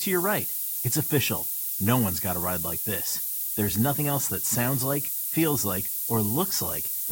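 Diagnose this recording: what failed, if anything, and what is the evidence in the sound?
The failure sits at the sample-format conversion stage: low bit depth with noise shaping, present for the whole clip. A steady, thin hiss runs under the speech from start to finish and climbs sharply toward the top of the band. It's roughly as loud as the speech itself, which fits a word length of about 4 bits. With so few levels, the rounding error is huge, and the shaping filter pushes it upward, so it piles up as bright hiss rather than spreading evenly.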